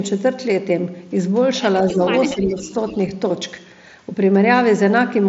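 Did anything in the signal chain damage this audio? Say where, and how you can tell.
Yes. Speech suppressed in double talk dips the level by about 5 dB at 1.9–2.0 s and again at 2.34–2.73 s, while the other side is talking. This is call processing: the echo canceller likely could not tell this talker from loudspeaker echo and attenuated both.

An echo leak at 2.15–2.63 s and 2.88–2.97 s brings in a faint copy of the voice trailing 247 ms behind, about 15 dB and then about 20 dB below the speech. Again call processing: a loudspeaker end's echo canceller likely left some microphone pickup unremoved and returned it.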